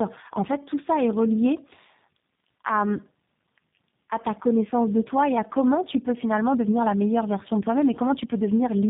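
Throughout the clip the speech carries tandem speech coding. Two low-rate speech codecs in a row, which fits an AMR-NB stage followed by G.729A, each re-encode the previous one's damage, leaving a rough, warbly, muffled sound with nothing above 3.7 kHz.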